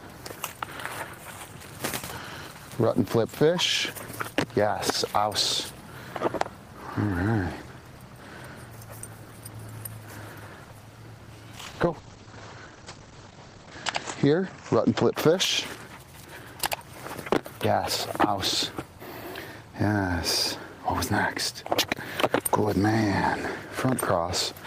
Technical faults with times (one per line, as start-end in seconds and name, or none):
11.55-15.20 call bitrate drop